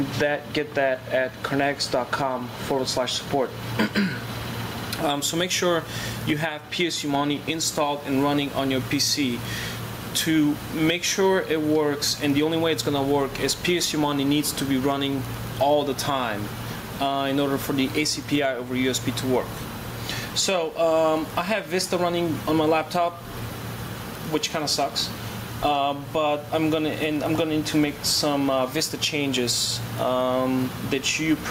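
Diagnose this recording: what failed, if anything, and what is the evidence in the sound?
The input gain was most likely set far too high for the microphone, with a fast limiter or compressor forcing the level back down on each loud sound. The result is gain pumping across the whole clip: the level rises and is pulled back repeatedly, with a swing of around 15 dB. Loud and soft passages are pushed closer together in level, so the sound comes across as squashed.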